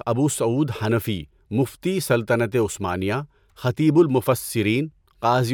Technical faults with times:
none

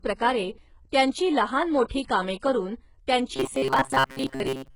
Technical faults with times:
0.00-4.75 HE-AAC compression
3.36-4.75 robotic sound from repeated short buffers

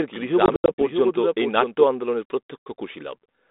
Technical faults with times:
0.00-1.84 doubled audio track
0.46-0.83 packet loss on an ADPCM call
2.65-2.79 packet loss on an ADPCM call

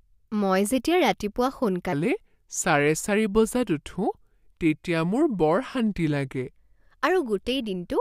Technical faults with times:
1.93-6.54 section at the wrong speed

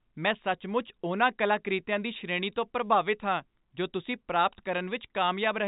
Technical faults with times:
none

